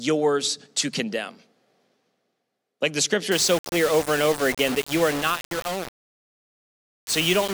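The audio path likely requantized this speech to very few bits with plain rounding and no dither, a case of low bit depth without dither. From 3.32 s, just after "the scripture", to the end at 7.53 s, the sound turns grainy and gritty, with distortion that tracks the voice and sits only about 10 dB below it. Quiet passages break up and sputter between levels, which fits a word length of around 4 bits.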